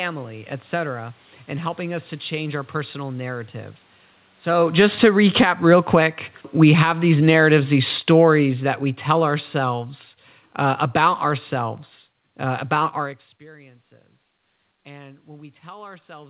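From 4.64 s to 13.02 s there is automatic gain falling. Just before it, around 4.5 s, the talker comes closer and the input gets louder. The gain control reacts by turning itself down. Over about eight seconds it lowers the level by about 17 dB. The voice sinks slowly, and the room noise sinks with it. The drop is gradual, not a step.

At 13.45 s automatic gain rising begins and runs to the end. Around 13.0 s the talker moves away, and the input falls by about 24 dB. The level drops suddenly. Then the gain control starts turning itself back up. Voice and room noise swell together over the last three seconds. Throughout, nothing is heard above 4 kHz, which fits a narrowband call codec such as G.711.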